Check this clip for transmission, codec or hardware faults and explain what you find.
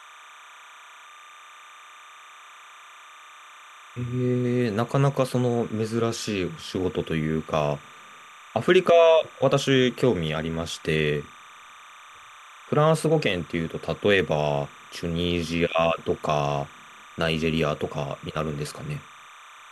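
One hardware fault runs through the whole clip, beneath the speech.

Timecode bleed, throughout: linear timecode from an adjacent track or cable is leaking into the audio path. Its square wave flips between pitches around 1 and 2 kHz at a 30-frame rate, producing a steady chirping warble roughly 25 dB below the speech.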